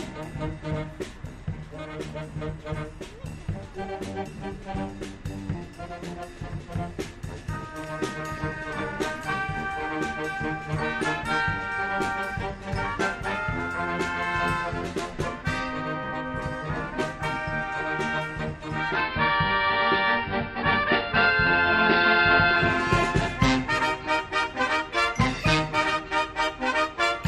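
Digital radio blending to analogue occurs from 18.62 to 22.95 s. The receiver lost its digital stream and cross-faded, over about 420 ms, to the station's AM broadcast, then returned to digital at the end. While on AM, the sound turns dull and narrow, and a low hiss sits roughly 35 dB under the programme. The level holds steady across both transitions.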